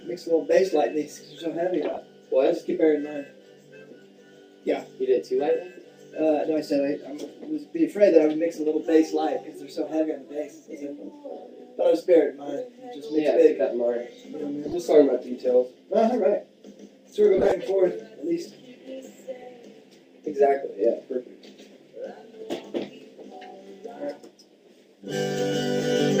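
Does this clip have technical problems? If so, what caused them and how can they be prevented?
Yes. Corrupt frame decoded at 1.93 to 1.98 s, 14.67 to 14.74 s, 17.37 to 17.52 s and 19.39 to 19.45 s. Each time, bits inside compressed frames were flipped and the decoder played them anyway, so misread gains and codes put energy at the wrong frequencies for a few frames. The result is a short chirp or noise burst: loudest at 17.4 s, around -5 dBFS, and faintest at 19.4 s. Prevent it by checking each frame's checksum and concealing failed frames instead of decoding them.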